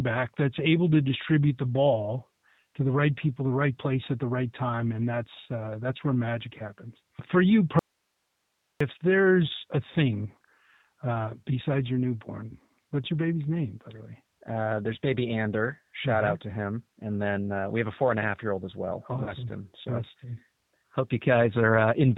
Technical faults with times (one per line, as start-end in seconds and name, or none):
0.00-22.17 G.729 codec
7.79-8.80 audio dropout to a faint residue
19.24-19.33 VoIP packet loss concealed by the speech codec